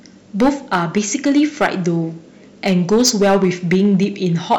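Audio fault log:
throughout: hard clipping. The speech is driven roughly 8 dB past what the stage can pass, so a few percent of samples are cut flat at the limit. Those squared-off peaks add high harmonics, heard as a harsh, crackling fuzz on the louder syllables.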